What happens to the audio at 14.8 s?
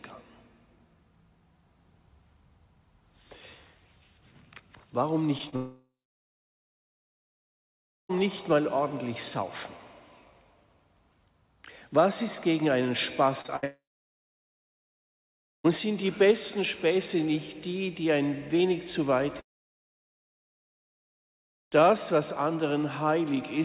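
At 14.8 s the audio is in the middle of what sounds like a long network dropout, running from about 13.65 s to 15.66 s, likely caused by a two-second stretch of audio never reaching the receiver. The receiver briefly extends the last sound as a fading buzz or hiss. For roughly the final 1.8 s of the gap, including 14.8 s, only silence remains. The sound then resumes at 15.66 s, still band-limited below 4 kHz by the call codec, with the missing portion simply gone.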